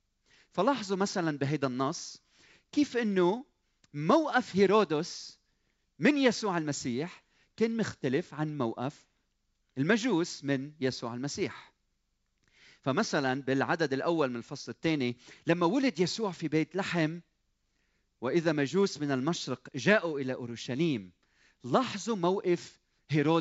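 Nothing stood out on listening to this speech, which comes across as ordinary G.722 wideband telephone audio.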